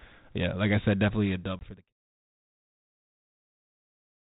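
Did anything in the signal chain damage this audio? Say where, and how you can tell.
Yes. Packet loss on an ADPCM call at the network stage, 1.59 to 1.65 s, just after "I said definitely a": a hard-edged 20 ms silence, pointing to a couple of lost packets, then slightly distorted speech. A plain dropout would resume cleanly. Here the decoder's predictor and step size had drifted from the sender's and needed tens of milliseconds to resettle.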